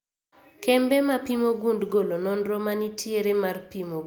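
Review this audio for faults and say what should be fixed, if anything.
No faults can be heard anywhere in this speech recording. Nothing needs to be fixed.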